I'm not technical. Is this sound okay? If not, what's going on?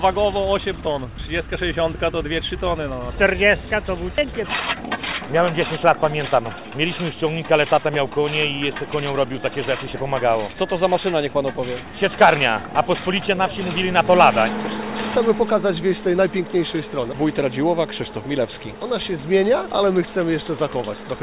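No. At about 4.2 s there's a skip ahead: roughly a second of sound just goes missing, and playback jumps straight to later sound with almost no gap, so the two sides are stitched together abruptly. That stretch was likely dropped on its way through the call line.

Right after, from 4.21 to 5.98 s, there's a jitter buffer speed-up. The receiving end had too much sound queued up, so it trimmed tiny slivers out to catch up, nearly half a second in total. The sound runs about 23% faster at the same pitch and feels rushed. The narrow, phone-like tone throughout comes from the normal call connection.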